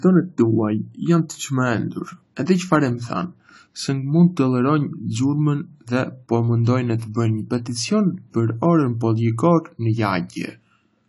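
From start to end the speech has nothing above 11.5 kHz, sounding dull and smeared, with a warbling, fizzy texture on sibilants and held sounds. The likely cause is AAC compression at a low bitrate, fitting about 32 kbps, where the encoder trims the top band and starves the rest of detail.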